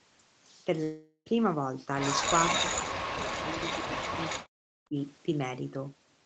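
Speech, marked throughout by a block size mismatch (truncated): a steady 43.1 Hz buzz runs under everything, which fits 1024-sample blocks whose tails are dropped, while the speed stays essentially normal. On a spectrogram this appears as evenly spaced vertical striations; the waveform shows small regular discontinuities at each block boundary. From 0.83 to 1.28 s comes a long network dropout, likely the cause of a fading fill lasting about 0.42 s and a brief 50 ms silence before speech resumes with roughly 0.42 s lost. On a waveform this looks like a decaying smear and then a flat gap; a spectrogram shows a blurred, fading band that ends before the next words. Between 2.54 and 4.96 s, speech suppressed in double talk likely makes the voice dip, dull or break up for around two seconds in total, falling by about 40 dB at its deepest. The spectrogram shows the energy and high frequencies thinning out in patches, and the waveform envelope shrinks in irregular chunks.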